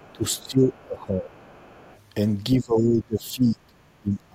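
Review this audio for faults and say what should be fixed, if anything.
The other side's voice leaks through faintly at 0.0 to 0.81 s, 1.31 to 1.93 s and 2.78 to 2.85 s, about 30 to 35 dB below the speech. This likely comes from an echo canceller leaving loudspeaker residue in the microphone.

Speech is suppressed in double talk from 0.13 to 1.47 s and from 2.56 s to the end. It dips by up to about 20 dB. Both sides likely talked at once, so the canceller turned everything down.

To prevent both, use a headset or tune the echo canceller for better double-talk detection.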